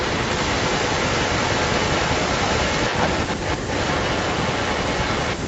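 Speech, with an echo leak running from 0.0 to 5.47 s: the far end was likely playing the call on a loudspeaker, and its echo canceller failed to strip what its microphone picked back up, so that sound was returned down the line. The result is a second copy of the voice trailing the original by about 347 ms and arriving at roughly the same loudness, present across the whole clip within the call's 8 kHz band.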